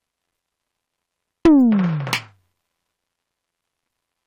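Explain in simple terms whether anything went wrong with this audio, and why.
Nothing went wrong here; the music comes through without any glitches, dropouts or odd noises at any point.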